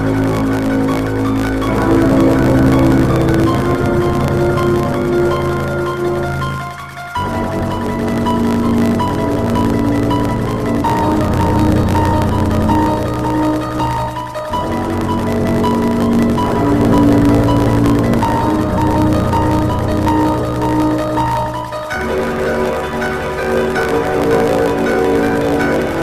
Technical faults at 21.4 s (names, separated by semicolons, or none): block size mismatch (truncated)